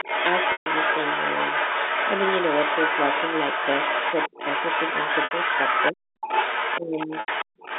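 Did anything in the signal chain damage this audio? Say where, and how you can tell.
Yes. The damage sits in the call processing and the network.

The other side's voice leaking through is audible from 0.0 to 5.92 s, 6.21 to 6.8 s and 6.97 s to the end, about 5 dB below the main talker. It is likely an echo canceller leaving residual loudspeaker signal. A spectrogram shows a second, overlapping harmonic pattern.

Packet loss with pitch repetition occurs at 0.52 s (140 ms), 5.24 s (70 ms) and 7.2 s (80 ms). The receiver loops the last pitch period and fades it out over about 50 ms into silence. On a spectrogram it appears as flat, frozen harmonics that fade, with a cross-fade back into speech.

Speech is suppressed in double talk at 4.3 to 4.39 s (about 20 dB down), 5.92 to 6.02 s (about 40 dB) and 6.78 to 7.09 s (about 20 dB). The likely cause is the canceller ducking both voices together. 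The waveform shows sudden envelope notches.

Background is gated by the echo canceller at 7.45 to 7.57 s. The room sound drops about 40 dB for roughly 100 ms while the loudspeaker plays, then returns. On a spectrogram the noise floor goes abruptly blank for that moment.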